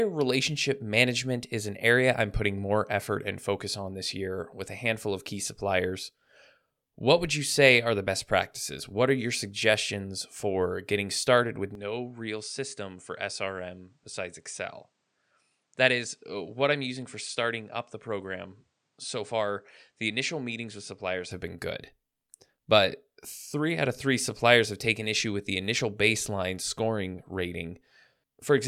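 From 11.75 s, after "for getting started with", to 21.31 s, before "have been good", the waveform abruptly drops about 5 dB, a faint new noise floor appears, and the spectrogram is empty above 9.8 kHz, likely an input switched to a poorer device.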